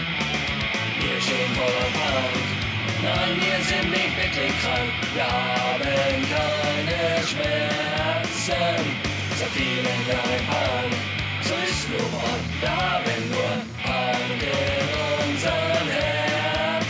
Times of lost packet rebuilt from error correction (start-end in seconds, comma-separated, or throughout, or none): none